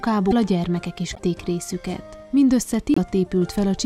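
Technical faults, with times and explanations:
0.30–0.33 s, 1.14–1.19 s, 2.94–2.98 s: broken MP3 bit reservoir. The sound jumps ahead into a brief garbled patch, likely because dropped frames left the following frames, about 24 ms each, reading borrowed bytes from the wrong frame. Waveform: abrupt discontinuity. Spectrogram: short broadband smear.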